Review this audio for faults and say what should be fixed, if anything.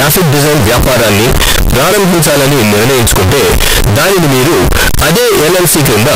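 The audio was likely stored as 32-bit float samples but read back as 32-bit integers, a float read as integer fault running through the whole speech clip. Because the sign and exponent bits end up setting each sample's value, the waveform turns nearly square at an almost fixed, high level regardless of the original level. The result is very loud and harsh, with background noise as loud as the speech, though the pitch and often the words can still be followed. To prevent it, make sure the sample format declared in the file header matches the format the reading code expects, and convert explicitly between float and integer where the two differ.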